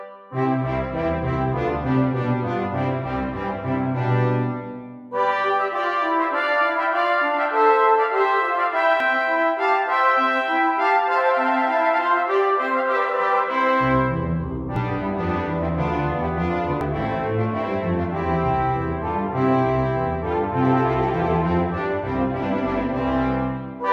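At 9.00, 14.76 and 16.81 s the audio jumps ahead, losing roughly 40 ms, then about 150 ms, then 40 ms again. That's likely a dropped buffer (overrun), where samples got overwritten before being read, so the surviving edges butt together.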